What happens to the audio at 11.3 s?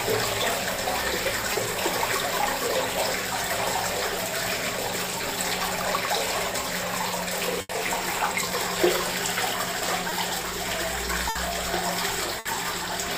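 At 11.29 s a burst of packet loss hits the sound and lasts until 11.37 s. Several packets arrive too late or not at all. The receiver stretches the last sound for about 60 ms and lets it fade, so a brief held buzz or hiss is heard. Playback then resumes with roughly 60 ms skipped.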